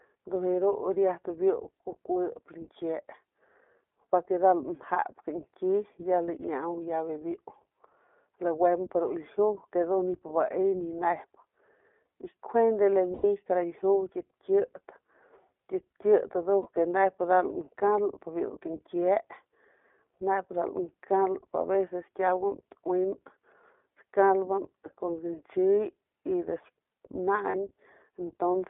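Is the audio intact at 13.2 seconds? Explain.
No. Between 13.14 and 13.26 s there are lost iLBC frames, which fits five missing 20 ms frames. The decoder repeats the last pitch cycle mixed with noise, so the gap sounds like a held, buzzy vowel. The sound recovers almost at once. Throughout, the iLBC codec limits the band to roughly 300 Hz to 3.5 kHz and adds a plainly audible rough, synthetic edge.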